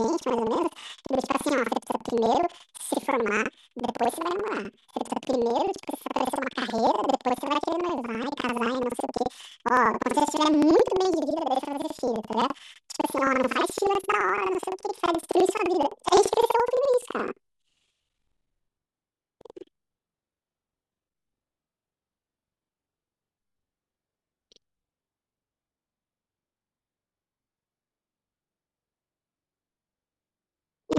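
Speech with planar audio read as interleaved: each 85.33 ms block plays twice, an octave high, at normal pace, with a 11.7 Hz flutter, unlike a plain sample-rate mismatch.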